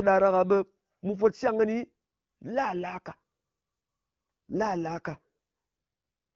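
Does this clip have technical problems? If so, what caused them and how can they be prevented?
Yes. From 4.5 to 5.19 s there's an AMR rate drop: the voice goes rougher and more synthetic with no gap and no change in bandwidth. That fits the network pushing the AMR-WB codec from 12.65 down to around 8.85 kbit/s, trading speech bits for error protection on a weak radio link. Better signal strength or a more stable radio connection would keep the codec at its higher rate.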